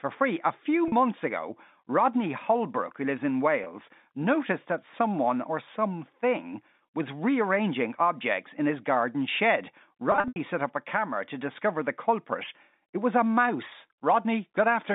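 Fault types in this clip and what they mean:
Packet loss with pitch repetition: lost stretches are bridged by looping the last pitch cycle, so the 20 and 40 ms gaps become brief buzzy holds, and the losses scattered over 240 ms near 10.1 s fade out. Unlike a plain dropout, there's no hard silence or click.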